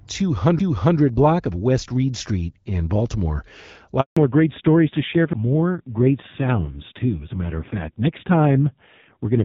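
At 0.59 s, just before "block of", a CD skip: the pickup jumps to another track turn, heard as a tick and a very brief mute before playback resumes elsewhere. From 4.01 to 4.17 s there is a 160 ms handover gap: the call switches networks, no speech frames arrive, and the audio fades quickly into silence until the new link delivers. At 4.17 s the clear wideband coding gives way to a fallback to narrowband. Everything above 4 kHz disappears for the rest of the clip, and the voice turns dull and rough, which fits a low-rate narrowband codec. At 5.33 s a second CD skip brings another tick with an even shorter mute and a jump in position.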